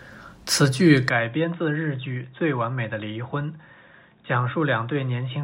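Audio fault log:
1.09 s to end: input switched to a poorer device. The sound abruptly turns dull and boxy, with nothing above 3.8 kHz, roughly 10 dB quieter, and a faint new noise floor, with no gap at the change. This is likely a swap to a narrower-band microphone.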